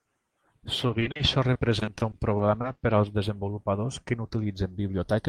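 Channels drifting apart runs throughout the speech. The two channels sit on clocks that disagree by roughly 70 ppm, so the inter-channel delay creeps up to a fraction of a millisecond. Summed to mono, the comb notches glide slowly, heard as slow flanging.

Repeated packet loss (robotic sound) spans 0.87 to 2.65 s. Over a dozen holes, the longest 40 ms, are patched by extending the preceding sound, covering about 16% of that stretch. The repeated patching makes the speech choppy, with fragments missing.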